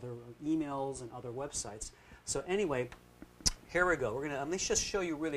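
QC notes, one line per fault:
2.63–5.37 s, video or display buzz: a buzz enters at 2.63 s and runs to the end of the clip, sitting roughly 25 dB below the sound. A screen or video cable is coupling into the audio path, so the picture's 60 Hz field rate comes through as a rough, harmonic-rich buzz with a layer of fizzy hash above it, from the sharp edges of the video signal leaking in alongside the refresh pulses.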